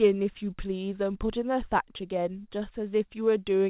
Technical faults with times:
none

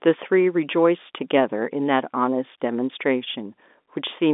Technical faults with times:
none

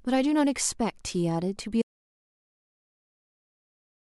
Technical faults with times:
1.82-4.02 audio dropout to silence

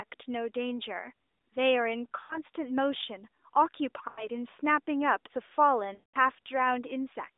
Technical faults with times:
2.20-2.39 lost AMR speech frames
4.08-4.27 lost AMR speech frames
5.94-6.16 lost AMR speech frames

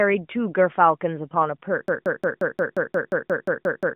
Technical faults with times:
1.88-3.95 broken-record loop

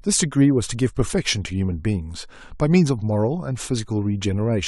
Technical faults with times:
none

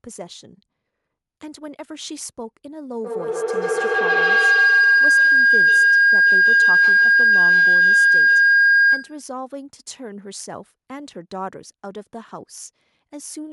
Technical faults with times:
3.04-9.26 feedback howl

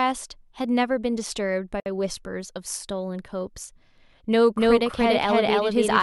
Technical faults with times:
1.80-1.86 gap at a join of encoded pieces
4.56-6.03 doubled audio track

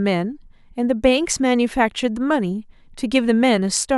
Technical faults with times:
0.71-3.71 clock drift buffer slips

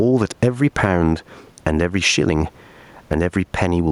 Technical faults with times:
0.00-3.91 gain pumping

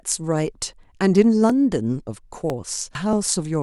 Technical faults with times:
1.50-3.13 periodic USB or driver dropouts
2.95 damaged data in a compressed stream

